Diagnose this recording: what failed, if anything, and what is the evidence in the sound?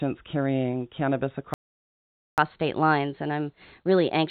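A playback stall cuts the speech off at 1.54 s. The output goes completely silent until 2.38 s, a gap of about 0.84 s. The speech then resumes. This fault sits at the playback stage, after the telephone-band path, which carries nothing above 4 kHz. The player most likely ran out of buffered data or had its output thread blocked, so it simply stopped feeding the converter.

Catch-up at higher speed follows directly from 2.38 s to the end of the clip. The speech runs 1.15 times faster than normal. Pitch rises with it, by roughly two semitones, so it sounds hurried and slightly squeaky. This is also a playback-stage fault. To recover lost time, the player resamples its backlog instead of time-stretching it. Speed and pitch therefore rise together and stay raised until the clip ends.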